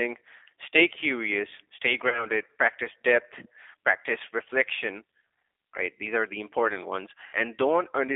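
The whole thing runs through a G.729 codec, and the damage is easy to hear. The line is squeezed into roughly 250 Hz to 3.6 kHz, so it's thin with no top end. On top of that there's the slightly rough, synthetic edge you get when speech is rebuilt from a vocal tract filter, a pitch predictor and a few pulses per frame. That character fits a G.729A stream at 8 kbit/s.

At 2.09 to 2.26 s there's VoIP packet loss concealed by the speech codec. The decoder lost about 30 ms of audio, which fits three 10 ms frames. It filled the gap by repeating its last pitch and filter at falling gain, so the speech smears into a buzzy tone or coloured noise that fades. It stays a bit weak for a moment after packets come back. The same thing happens again at 7.26 to 7.38 s. This time about 70 ms went missing, roughly seven frames' worth, so the stretched patch is longer.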